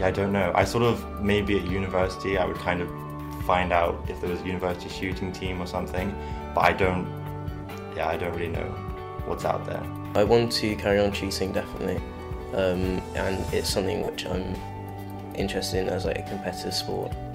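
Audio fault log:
14.04–14.08 s, lost LE Audio frames: a brief, grainy smear replaces the sound for 40 ms. This fits about four consecutive frames missing from the Bluetooth LE Audio stream. The LC3 decoder filled the gap by repeating the last spectrum with randomised signs.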